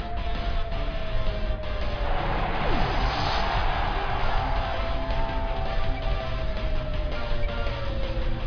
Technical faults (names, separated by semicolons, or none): none